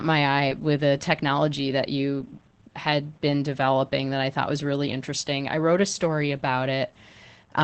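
Throughout, Opus voice compression removes all sound above 8.6 kHz and leaves speech hoarse and faintly robotic rather than merely muffled, which fits about 12 kbps.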